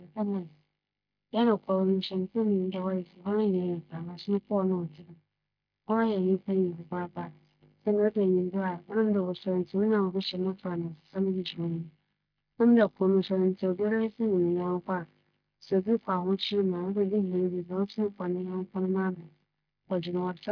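Nothing technically wrong turns up anywhere in this speech recording, so there's simply no fault to point to and no moment worth flagging.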